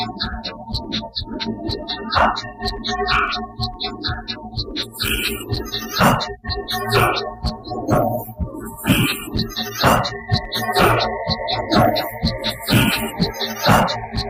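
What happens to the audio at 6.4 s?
At 6.4 s the sound carries hard clipping, present across the whole clip. The signal was driven about 11 dB beyond what one stage could pass, so its peaks were cut flat, with a few percent of samples affected. Those squared-off tops add harmonics far up the spectrum, heard as distortion riding on the louder moments. On a waveform the peaks show flattened plateaus; a spectrogram shows bright, smeared energy reaching into the top kHz bands whenever the level rises.

The same moment also shows a noise suppressor applied to music or sounds, again running through the entire clip. A processor tuned for speech treats steady tones, ambience and reverb as noise and pulls them down, here by around 10 dB, while attacks largely pass. The result is level that pumps, flutters or thins as sustained parts sink. A spectrogram shows onsets intact but held bands and decaying tails fading abruptly into dark gaps, and the waveform envelope dips sharply after each attack.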